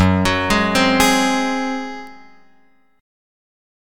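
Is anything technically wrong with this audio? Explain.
Yes. At 2.07 s there is a single sharp tick, broadband and unrelated to the surrounding audio, peaking at about -26 dBFS and gone almost instantly. This is a bit error spike: a bit was flipped in memory or on a digital link, so a sample value jumped by a power of two and snapped back. The tick's extreme brevity suggests the corruption spanned only a couple of samples.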